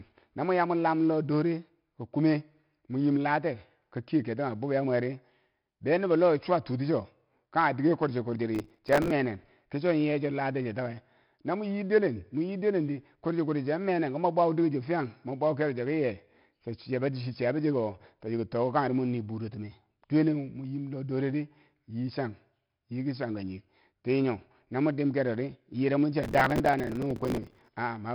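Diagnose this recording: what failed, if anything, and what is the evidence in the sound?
The codec stage applied 4-bit ADPCM compression across the whole clip. A gritty hiss rises and falls with the speech level, sharp onsets distort, and nothing remains above 5.3 kHz. That fits roughly 44 kbps. Unlike transform codecs, there is no swirling or warbling, only level-tracking grit.

Processor overload crackle points to a driver or buffer stage. It runs from 8.55 to 9.11 s after "diker kwurchikwur" and from 26.24 to 27.68 s after "yire mwi chia". Dozens of missed buffers of a few milliseconds each repeat stale audio with hard edges, causing dense tearing rather than the longer silent gaps of network loss.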